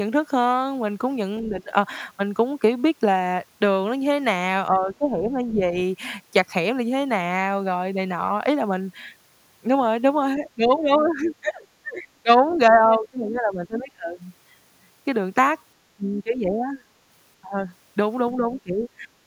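Speech suppressed in double talk first appears from 1.41 to 1.73 s, and again from 4.7 to 5.75 s. The talker's level sags by up to about 15 dB and about 10 dB. This is likely an echo canceller that could not separate this talker from the far end playing at the same time, so it turned everything down. The longest stretch runs from 10.38 to 14.22 s, with dips of up to about 20 dB.

Within that stretch, the other side's voice leaks through at 11.08 to 11.3 s and briefly at 12.5 to 12.57 s. These are faint scraps, roughly 25 dB below the talker. They are likely loudspeaker playback that the echo canceller failed to remove fully from the microphone signal during the overlap.

Suppression returns from 15.96 to 16.82 s, with a drop of about 15 dB. It comes back twice more, from 17.41 to 17.65 s and from 18.35 to 19.09 s, each dipping by about 20 dB. In these passages the voice ducks sharply as the far end talks over it.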